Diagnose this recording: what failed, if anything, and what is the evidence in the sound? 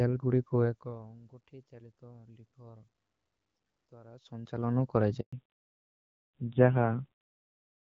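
Handover gap at 5.21 to 5.33 s, in the network: speech stops for 120 ms while the call switches links and no frames arrive.

Fallback to narrowband from 5.33 s onward, in the codec: everything above 4 kHz disappears, and the duller, rougher speech points to a low-rate narrowband codec.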